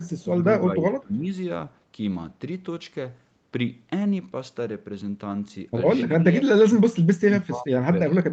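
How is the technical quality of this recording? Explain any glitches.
The recording is a call-quality speech capture, band-limited to about 8 kHz. It has two kinds of glitches: a brief echo leak at the very start and several dips from speech suppressed in double talk.

Echo leak, 0.01 to 0.22 s: A faint delayed copy of speech, trailing its source by 297 ms, sits roughly 35 dB below the main level. It is most likely loudspeaker sound from the far end that the echo canceller failed to remove before sending it back. It is heard as a faint delayed scrap of voice. On a spectrogram it shows as a weak, smeared repeat of the formant pattern offset by about 0.3 s. On the waveform it is barely visible.

Speech suppressed in double talk, at 0.64 to 1.29 s, 6.19 to 6.46 s, 7.16 to 7.87 s and 8.09 to 8.30 s: The speech level falls suddenly. The drops range from about 15 dB to about 30 dB, with the deepest at 7.16 to 7.87 s, and each affects about 150 to 500 ms. 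The likely cause is an echo canceller that could not separate this talker from the other side speaking at the same moment, so it attenuated both. The waveform shows abrupt notches in the envelope, and the spectrogram shows energy thinning or vanishing in patches.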